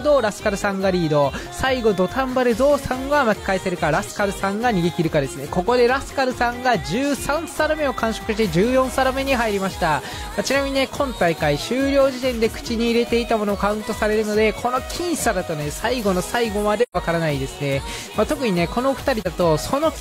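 At 16.82 s the sound fades into a silent gap until 16.97 s, and again briefly from 19.21 to 19.27 s. This is AAC frame loss with muting. The decoder zeroed the missing frames' spectra, and the overlapping windows soften both edges. The lengths fit roughly three lost frames, then one.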